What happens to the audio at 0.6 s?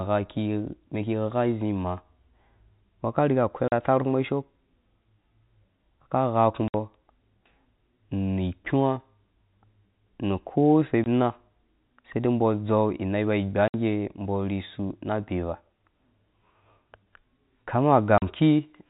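Nothing goes wrong at 0.6 s: the speech passes through intact, carrying only the narrow, sub-4 kHz sound of ordinary G.711 telephone coding.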